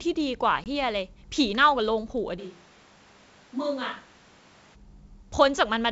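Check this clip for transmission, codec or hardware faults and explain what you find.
Two faults are audible in this speech clip, carried over wideband G.722 coding at a bitrate consistent with 64 kbit/s, whose own coding damage is faint at most.

From 0.64 to 0.67 s there is packet loss on an ADPCM call. About 20 ms of audio, roughly a single packet, drops out as a hard-edged silent gap. Because the receiving decoder's adaptive predictor and step size lose track of the sender's, the speech comes back briefly slightly distorted before it resettles.

From 2.41 to 4.74 s the sound changes abruptly to a hollow, roomy character, thinner in the low end and roughly 5 dB quieter, with room noise only about 25 dB below the speech. This is likely a switch to a distant microphone, with the close microphone's feed lost until the abrupt return at 4.74 s.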